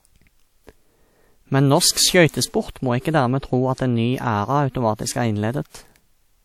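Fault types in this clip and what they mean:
Pre-echo: block-based coding spreads noise before a sharp onset. From 1.91 to 1.97 s, a 55 ms hiss leads in, blurring the attack.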